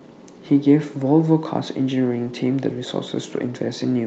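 No technical faults are audible.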